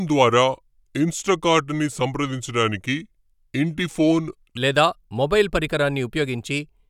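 From 0.0 to 4.57 s, before "లేదా మొబైల్ పరికరాన్ని ఉపయోగించి", a section at the wrong speed plays at 0.80x, slow and about four semitones deep, likely from a clock mismatch.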